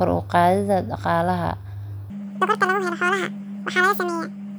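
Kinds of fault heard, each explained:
Section at the wrong speed: the playback or editing stage has likely run this part against the wrong clock, feeding the samples out at 1.99 times the rate they were captured. Because speed and pitch are tied together, the speech from 2.1 s through to the end at 4.59 s jumps abruptly into a hurried, chipmunk-like register, raised by roughly ten semitones, with syllables squeezed to about half their natural length.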